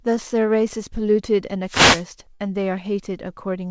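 From 1.65 to 2.06 s, a wireless microphone noise hit occurs: the analogue FM radio link faded as reflected signals cancelled, letting receiver noise climb. This sounds like a swish of static lasting about 0.4 s.

At 2.34 s, a burst of packet loss leaves about 60 ms of audio missing. The receiver bridged roughly 55 ms by stretching the last sound and fading it, heard as a brief held buzz or hiss. The speech then picks up at 2.41 s, further along. The call path's band limit, with nothing above 8 kHz, fits a wideband codec such as G.722.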